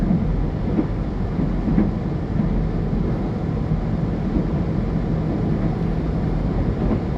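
A recording of everyday sounds with nothing technically wrong with it.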